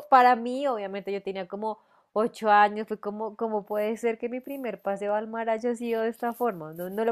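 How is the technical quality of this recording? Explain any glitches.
Two brief glitches stand out in this speech recording: single sharp clicks at 5.09 s and 6.31 s. Each is likely dropped samples, where a handful of samples, about a tenth of a millisecond, go missing, so the waveform jumps abruptly and produces a click without removing any audible sound.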